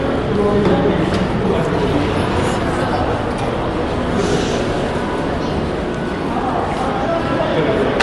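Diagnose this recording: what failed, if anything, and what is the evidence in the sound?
Bluetooth LC3 compression runs throughout, at the codec stage: nothing is present above 11.6 kHz, and the sound carries a plainly audible grainy, breathy edge where upper detail has been replaced by noise fill. That points to a likely LC3 encode at a modest rate, around 48 kbps with 10 ms frames.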